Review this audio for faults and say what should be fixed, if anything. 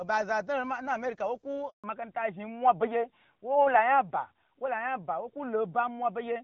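A handover gap runs from 1.70 to 1.84 s. The speech dies away within a few tens of milliseconds and stays silent for 140 ms while the call switches networks and no speech frames arrive. Unlike a packet-loss dropout, there is no concealment or repeated fragment, and the bandwidth is different afterward. Using make-before-break handover keeps the old link carrying speech until the new one is ready.

A fallback to narrowband follows at 1.84 s and lasts to the end. Everything above 4 kHz is gone, so the speech turns duller and rougher than the clear HD Voice before the gap, which fits AMR-WB at 12.65 kbit/s dropping to AMR-NB at 12.2 kbit/s. A plain low-pass filter would not explain the change beginning exactly at the handover or the added codec roughness. Making sure the target network supports and negotiates AMR-WB would keep the call wideband after the switch.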